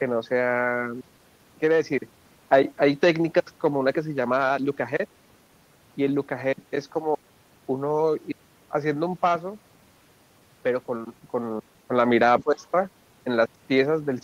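At 12.39 s a faint second voice slips in underneath the speech and stays until about 12.66 s, sitting roughly 20 dB below the main talker. This is the other side's voice leaking through. The far end was played on a loudspeaker at the talker's device, and the echo canceller likely failed to strip all of that playback from the microphone signal, so a residue of the other party rides along with the near-end speech for about a quarter of a second.

Almost at the same moment, from 12.44 s to 12.63 s, the talker's own speech sinks, dropping by around 10 dB at its deepest over roughly 200 ms before recovering. This is speech suppressed in double talk. With both parties sounding together, the echo canceller likely could not tell the near-end speech apart from the loudspeaker echo, and it attenuated the whole signal rather than just the echo, pulling the wanted speech down along with it.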